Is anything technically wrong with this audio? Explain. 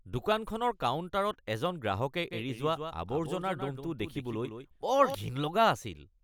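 Yes. From 2.31 to 5.15 s there is a doubled audio track: a dry copy about 10 dB quieter trails by roughly 150 ms, likely from a slower capture path, showing as abruptly bounded ghost syllables on the spectrogram.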